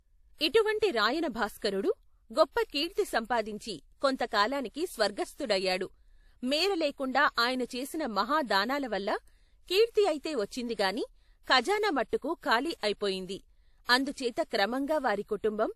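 Throughout this speech clip the sound is dull above 14 kHz and carries a layered coding haze, two different kinds of artefact heard at once. This is likely transcoding between lossy codecs, which fits a WMA encode at around 64 kbit/s re-encoded to AAC-LC at a similar rate.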